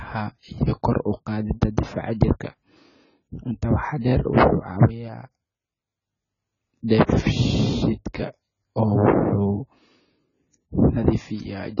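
Throughout, the speech sounds dull, smeared and warbly, with nothing above 7 kHz. This heavy damage is likely AAC compression at a very low bitrate.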